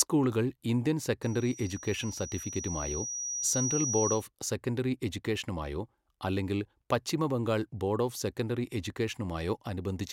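Loudspeaker feedback squeal from 1.23 to 4.28 s, after "സ്കൂളുകൾ ഇന്ത്യൻ": the microphone re-amplifies its own loudspeaker, so a 5.8 kHz tone swells over about two seconds above the speech.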